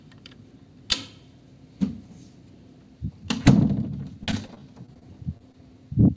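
Repeated packet loss (robotic sound) from 4.24 to 5.55 s: nine short gaps, each up to 33 ms, patched by extending the preceding sound, giving choppy audio with pieces missing.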